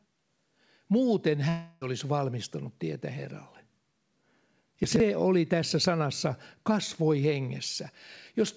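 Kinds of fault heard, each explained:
Long network dropout: From 1.49 to 1.84 s the stream stops arriving, likely a network outage, and about a third of a second of speech is lost; the decoder stretches the last sound into a fading buzz that fills the gap before "valmistanut tietä" resumes, with that missing stretch never recovered.
Chunks out of order: Between 4.84 and 5.0 s a 40 ms chunk arrives three chunks late and is played after the ones meant to follow it, so nothing is lost but the order is scrambled, giving a brief jumbled moment just before "oli tässä sanassa kasvoi".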